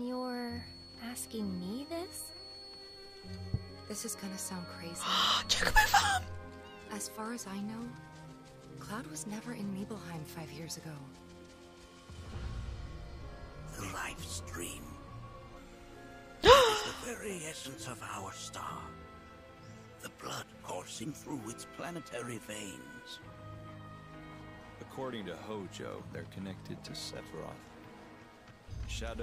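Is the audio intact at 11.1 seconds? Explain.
Yes, the audio is intact at 11.1 seconds, with no dropout, click, distortion or other technical fault at that moment.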